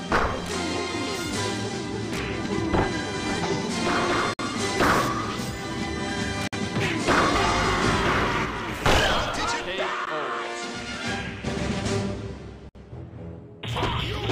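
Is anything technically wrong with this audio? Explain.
Yes. Gaps at joins of encoded pieces at 4.34 to 4.39 s (55 ms), 6.48 to 6.53 s (51 ms) and 12.69 to 12.75 s (59 ms). Separately encoded sections were spliced untrimmed, so encoder start delay and final-frame padding leave short silences with smeared edges. Each time, the sound then resumes where it broke off.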